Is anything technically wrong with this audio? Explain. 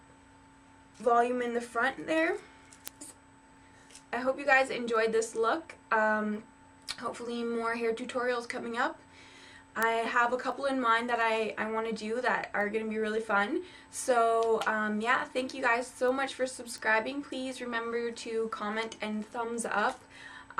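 Yes. There are word clock ticks from 0.79 s to 20.26 s. The receiving device on the digital link is running on its own clock instead of locking to the sender's, and the two clocks drift apart by roughly 30 parts per million. Each time they slip past each other, a single sample is dropped or repeated. That produces about thirty sharp ticks at a steady rate of roughly one every 0.7 s, and they vary in strength across the clip.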